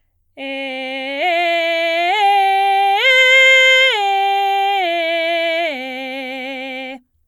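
Nothing in this bit of music stands out as a technical fault; it just rolls along with no glitches catching the ear at any point.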